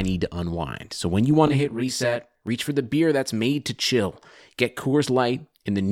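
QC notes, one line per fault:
1.47–2.47 s, channel delay (comb filtering): from just after "when you" until "reach for the beer", the speech sounds rough or doubled. One channel ran late by roughly 20 ms before the two were folded to mono, so everything common to both cancels at a fixed, evenly spaced set of frequencies, with the first notch down near 20 Hz. At a lag this long, the offset copy also registers as a second, trailing image of the sound.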